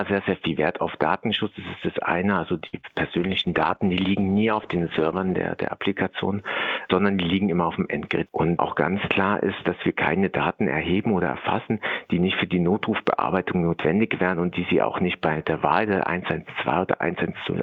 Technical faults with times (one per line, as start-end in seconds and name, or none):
2.67-2.75 burst of packet loss
2.81-2.85 short concealed packet loss
3.18-5.63 call bitrate drop